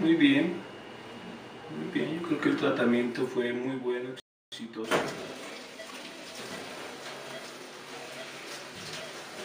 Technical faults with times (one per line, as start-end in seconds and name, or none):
4.20-4.52 playback stall
4.52-6.64 time-compressed catch-up